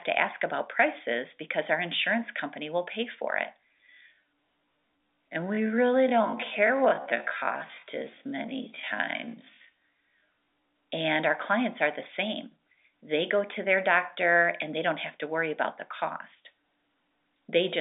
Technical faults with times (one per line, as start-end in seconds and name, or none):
3.56-10.72 time-stretched section